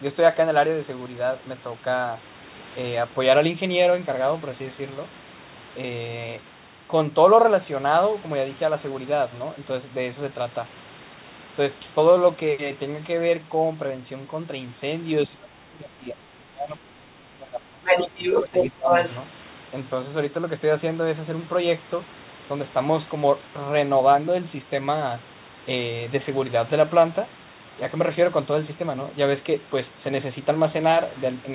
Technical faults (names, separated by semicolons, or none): speech suppressed in double talk; other side's voice leaking through